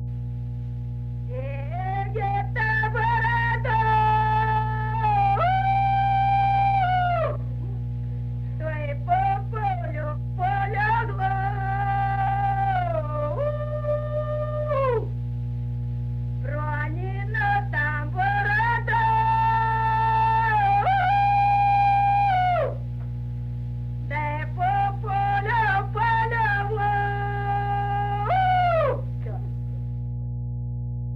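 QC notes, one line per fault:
Throughout: mains hum. A ground loop or nearby transformer couples the 60 Hz power line into the signal, leaving a steady low drone nearly as loud as the audio.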